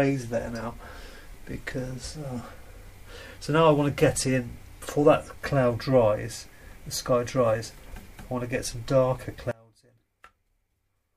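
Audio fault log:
9.51–11.16 s, one channel inverted: the sound suddenly drops about 28 dB, likely because one side flipped polarity and cancels the other in mono.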